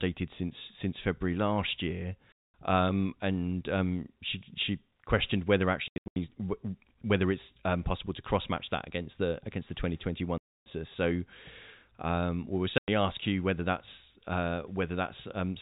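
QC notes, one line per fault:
2.32 to 2.53, 5.88 to 6.16, 10.38 to 10.66 and 12.78 to 12.88 s: packet loss filled with silence. The gaps follow "last year", "she she questioned whether" and "um we will". They last 220, 240 (broken up, runs up to 80 ms), 280 and 100 ms, which fits lost 20 ms packets replaced by hard-edged silence.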